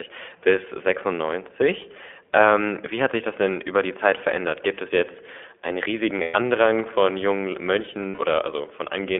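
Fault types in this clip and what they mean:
iLBC codec: This is a narrowband VoIP speech codec that codes each frame on its own, without relying on the previous one. Here the line is held to about 250 Hz to 3.4 kHz, so the speech loses its low body and all its upper brightness. The rate sounds like 15.2 kbps, which fits 20 ms frames. Coding damage is plainly audible. The voice comes through clear but rough and somewhat synthetic.
lost iLBC frames: Packets went missing, and the decoder filled each gap by repeating the last pitch cycle mixed with noise. There are two gaps. The first runs from 6.22 to 6.36 s, about 120 ms, after "es jetzt einen" and before "von jungen". The second runs from 8.08 to 8.19 s, about 100 ms, after "von jungen". Each gap sounds like a held, slightly buzzy vowel. Because frames are independent, normal speech returns almost immediately afterwards.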